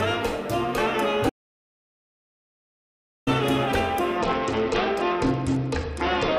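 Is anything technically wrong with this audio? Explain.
Yes, there are two faults. From 1.30 s to 3.27 s the sound cuts out abruptly into silence, with no background or room tone, and returns just as suddenly about 1.97 s later. This is an audio dropout to silence. The input was likely lost through a disconnected device, a failed link or a mute, and the recorder kept writing silence, so whatever played during that stretch is gone.

From 4.18 s to the end of the clip, the treble goes dull and a gritty, grainy texture settles over the sound. This is a Bluetooth SBC bit pool drop. Under link congestion the phone cut the SBC bit pool to keep the stream alive, which fits a fall from 31 to 10, around 77 kbps. The highest sub-bands then receive few or no bits and the rest are coarsely quantised, and the clip ends before the rate recovers.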